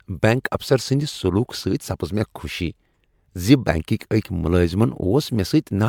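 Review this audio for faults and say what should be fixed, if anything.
Generation loss affects the whole speech clip: swirly, hollow smearing and blurred attacks, worse than one 128 kbit/s MP3 pass would give, likely from about five re-encodes. Content still reaches 20 kHz, unlike plain low-bitrate bandwidth cutting. Edit from a lossless master and encode once.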